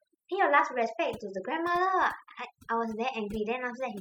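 Right from the start and through the whole clip, you can hear overdone noise removal on this speech. The reduction was pushed so hard that bands sitting near its noise estimate get gated out, taking quieter parts of the voice along. The background drops and breaks up into little twinkling specks.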